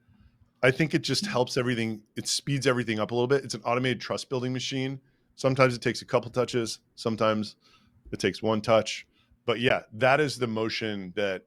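At 9.69 s the speech drops into a block of digital silence lasting about 15 ms, a run of samples set to zero, probably because the output buffer wasn't filled in time. It cuts in and out with no fade, so you hear it as a quick tick rather than a gap.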